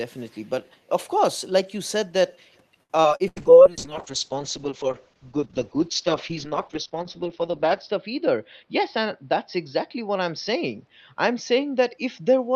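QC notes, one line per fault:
0.15–0.5 s and 2.52–2.57 s, echo leak: a very faint delayed copy of the speech, about 40 dB down, trails the original by roughly 215 ms. It's likely a loudspeaker on the far end whose echo canceller let some of the mic pickup slip back into the call.
2.83–3.39 s, repeated packet loss (robotic sound): four holes land close together, the longest 84 ms and 160 ms missing in total. Each one gets patched by stretching the previous sound, so over a third of that span is concealment and it comes out choppy.
3.28–12.56 s, call bitrate drop: from here to the end the sound gets coarse and dull, with the top end cut from 20 kHz down to around 6 kHz. That fits the encoder being throttled from about 32 to 7 kbps, and it stays at the bottom for about 4.6 s.
8.63–9.27 s, jitter buffer speed-up: the receiver had too much audio queued, so it snipped out short pitch-period chunks, roughly 50 ms in all. 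That part plays about 6% fast at unchanged pitch and sounds slightly hurried.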